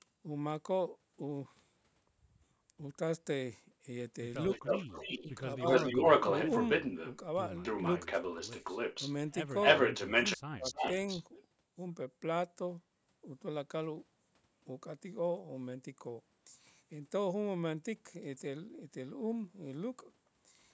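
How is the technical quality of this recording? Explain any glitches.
The recording has two faults, both typical of a hands-free call. A delayed echo of the speech comes back in two stretches, and the speech is briefly pushed down in three places. The audio carries nothing above 8 kHz, consistent with call microphone processing.

Echo leak, 4.5 to 7.17 s and 7.63 to 11.42 s: a second, delayed copy of the speech runs behind it, lagging by 277 ms in the first stretch and 291 ms in the second. The likely cause is the far end playing the call over a loudspeaker, with its echo canceller failing to strip that pickup before sending it back. The echo is strong, a little louder than the speech at first and roughly level with it later.

Speech suppressed in double talk, at 4.58 to 4.64 s, 5.24 to 5.63 s and 10.36 to 10.72 s: during the echo stretches the speech itself dips in short pieces. The dips total about 70 ms, 100 ms and 300 ms, reaching about 15 dB, 10 dB and 40 dB down. 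The last one nearly silences the talker. This is likely the echo canceller hearing both sides at once, failing to separate the talker from the returning echo, and attenuating everything.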